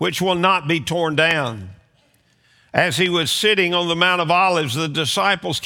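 A loud pop at 1.31–1.33 s stands well above the sound, followed at 3.06–3.25 s by a weaker double pop. Each is likely a sudden voltage step from a switch, plug or static discharge, added on top while the audio continues underneath.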